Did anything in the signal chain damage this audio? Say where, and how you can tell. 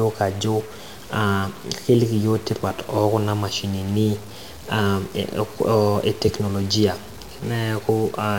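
Yes. A stuck bit runs throughout: distortion on the speech, with pauses filled by noise, likely from a converter or data line holding one bit fixed.

Chunks out of order at 4.63 s: a brief jumbled moment as a 5.8 ms chunk plays one chunk late in the driver or buffer, creating hard joins.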